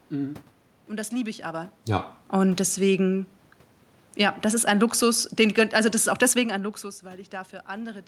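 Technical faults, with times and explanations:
4.06–6.69 s, automatic gain falling: the gain control judged the input too loud or its background noise too strong and eased down by about 4 dB, so the speech and the room noise sink together, unlike the talker simply shifting position around 6.5 s.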